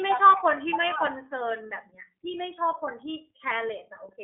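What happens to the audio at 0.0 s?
At 0.0 s the speech is already running through the iLBC codec, which persists for the whole clip. Each 30 ms frame is coded independently, giving a plainly rough, synthetic texture, consistent with its 13.33 kbps mode. The band is confined to 250 Hz to 3.5 kHz, with nothing above 3.8 kHz.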